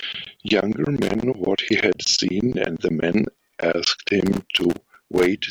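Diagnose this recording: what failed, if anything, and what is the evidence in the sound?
Irregular bursts of scratchy crackle break into the speech from 1.02 to 1.23 s and again from 4.26 to 5.26 s. That points to loose connector crackle in the analogue wiring: a worn or dirty contact is making and breaking as it shifts, chopping the signal.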